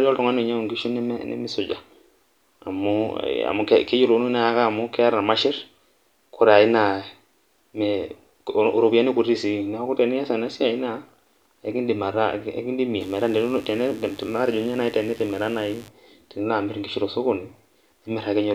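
A steady, raspy buzz sits under the speech from 13.00 to 15.88 s, fairly low against the voice. This is mains buzz: switching spikes from 50 Hz wiring leaking into the signal path.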